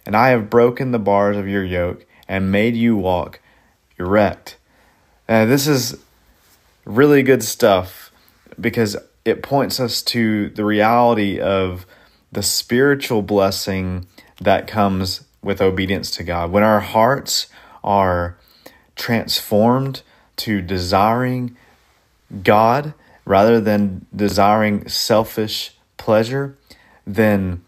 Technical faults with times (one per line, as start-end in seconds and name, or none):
22.20-22.27 chunks out of order
24.29-24.33 chunks out of order